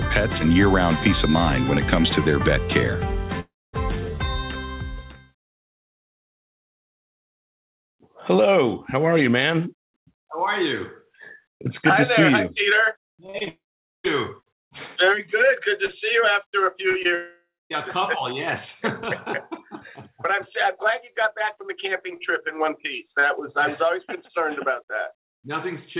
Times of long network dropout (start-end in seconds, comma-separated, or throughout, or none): 3.40-3.75, 13.48-14.06, 17.15-17.72